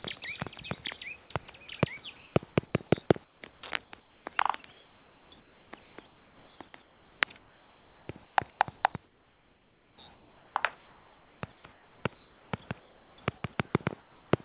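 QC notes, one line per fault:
2.16–2.36, 2.66–2.74, 3.24–4.26, 4.72–12.52, 12.8–13.18 and 14.0–14.32 s: comfort noise in place of the background. The sender likely stopped transmitting during pauses, and the receiver filled each gap with synthetic noise. The real room background becomes a flat, featureless hiss, up to about 4 dB quieter, until sound resumes.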